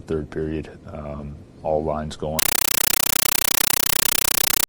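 At 2.39 s the sound gives way to harsh, very loud chattering static that runs right to the end. That's a compressed stream played as audio: an AC-3 bitstream went down the digital link and was taken for plain samples rather than decoded. Each data frame comes out as a 9.33 ms blast of noise followed by silent padding, repeating 31.25 times a second, and the density points to a fairly high-rate stream, around 448 kbps.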